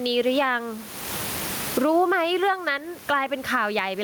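Gain pumping runs through the whole speech clip. The swing is large, around 25 dB. Loud and soft parts sit close together in level, and the sound is squashed. The room noise sits about 30 dB below the speech. The likely cause is gain set far too high, with a fast limiter or compressor clamping down on every peak.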